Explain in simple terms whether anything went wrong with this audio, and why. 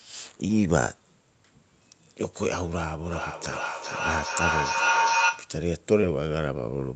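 Two things went wrong.

Short concealed packet loss happened twice, from 0.47 to 0.51 s and from 6.01 to 6.05 s. Each time, about 20 milliseconds of the call arrived too late to be played. The receiving end covered each gap by stretching out the sound it had just played and then blending back into the real audio. You hear a tiny smear or blip in the speech, and a very short sound could slip by unheard.

Feedback howl runs from 3.06 to 5.62 s. Two devices in the same room were on the call, so one's loudspeaker fed back into the other's microphone. The sound went round that loop again and again, getting louder each time instead of dying away. It settles into a whistling tone of roughly 1 kHz, with the loop coming round about every 0.4 seconds, and at its peak it is a little louder than the speech itself.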